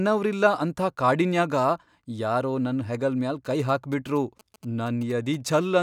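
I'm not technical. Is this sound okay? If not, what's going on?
No. From 3.45 to 5.59 s, after "ಯಾರೋ ನನ್ ಹೆಗಲ್ ಮ್ಯಾಲ್", a galloping dit-dit-dit of faint, short 217 Hz buzzes appears: GSM signalling bursts from a nearby 2G phone, picked up by the audio circuitry.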